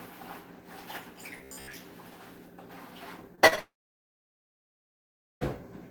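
From 1.38 to 1.74 s the sound turns into a rigid, metallic buzz near 67 Hz, the robotic sound from repeated short buffers. Most of that stretch is likely a roughly 15 ms segment replayed while late audio was skipped, imposing that fixed pitch.

Short concealed packet loss follows at 3.35 to 3.39 s, 3.47 to 3.54 s and 3.56 to 3.59 s, with gaps of about 20, 40 and 20 ms. The receiver extended the preceding sound across each hole, producing brief smears.

At 3.59 s a long network dropout likely begins. About 1.8 s of audio never arrives. The concealment carries the last sound for roughly a tenth of a second before fading, leaving silence for about 1.7 s until the sound resumes at 5.43 s, with the missing portion gone.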